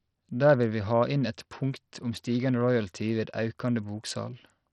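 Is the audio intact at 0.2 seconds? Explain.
No, at 0.2 s the speech carries heavy Bluetooth SBC compression damage, likely from a starved 64 kbps-class bit pool; on a spectrogram the upper bands flicker or vanish, with gritty noise smeared across the lower bands.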